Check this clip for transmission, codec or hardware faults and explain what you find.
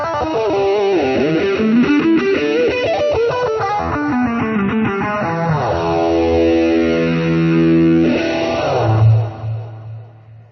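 One fault is present. From 3.97 s to the end, the quality changes abruptly, with coarser codec artefacts and no gap: an adaptive stream at a lower bitrate, switching versions mid-play as throughput fell, which fits a step from about 96 to 24 kbit/s AAC.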